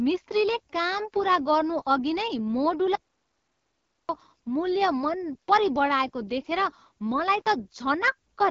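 The speech was coded with the AMR wideband (HD Voice) codec at a low rate, with a roughness that fits the 8.85 kbit/s mode. That is one of its two lowest steps, so the pulse-driven vocal tract model runs short of detail and the voice turns plainly raspy and gritty throughout, with noise-filled top end. From 2.95 to 4.09 s the input was likely lost to a disconnection or mute, producing an audio dropout to silence. About 1.14 s of speech vanishes into dead digital silence, with no room tone in the gap.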